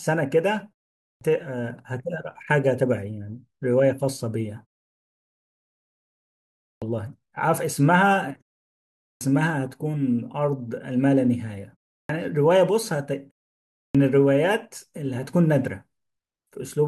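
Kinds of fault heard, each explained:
Clipped start after a pause: at 1.12, 6.72, 9.1, 11.99 and 13.85 s, speech bursts in abruptly with its first 90 to 110 ms gone. The output device sleeps through each silence, even one of 0.31 s, and must wake before sound passes.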